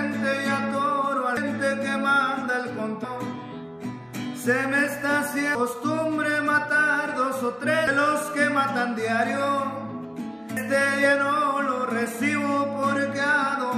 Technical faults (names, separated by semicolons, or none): damaged data in a compressed stream